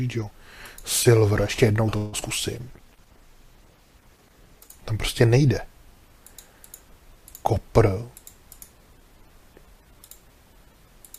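From 1.97 to 2.15 s the sound stretches into a fading buzz for about 150 ms. This call audio freeze was likely caused by delayed packets. Nothing is lost; a gap is inserted.

At 2.21 to 2.24 s comes a short concealed packet loss. About 40 ms never arrived. The receiver filled roughly 12 ms, leaving a brief smear or wobble.

A call bitrate drop runs from 2.54 to 4.89 s. The rate falls from 96 to 12 kbps and stays at the bottom for about 2.25 s. The sound turns coarse and muffled.

From 7.59 to 10.10 s a jitter buffer speed-up plays the audio at 106% speed. Around 150 ms of excess delay is trimmed away in small pieces. Pitch holds, but the sound feels hurried.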